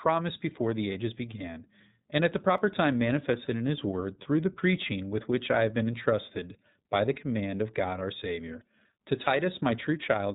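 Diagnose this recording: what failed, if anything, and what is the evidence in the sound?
The whole recording has passed through the iLBC codec, a codec-stage fault. The band stops at 4 kHz, so speech sounds thin and muffled, and the voice has a plainly audible rough, slightly synthetic texture. iLBC codes each frame's excitation independently, here in 30 ms frames, and the character of the damage fits its 13.33 kbps mode. That coarse excitation coding is what produces the roughness.

At 2.58 s there is a single sharp click, heard as a thin vertical line across the spectrum. This is a dropped-samples fault, most likely at the driver or buffer stage. Only a handful of samples, about 0.1 ms, are missing. The waveform jumps straight from one value to a later one, so the discontinuity clicks while no audible sound is removed.

From 9.24 to 9.27 s the voice briefly turns into a held, slightly buzzy vowel, then recovers almost immediately. 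This is lost iLBC frames, a network-stage fault. The 30 ms gap fits a single lost frame. The decoder concealed it by repeating the last pitch cycle mixed with noise. Each iLBC frame decodes without depending on the one before, so the next frame that arrives plays cleanly.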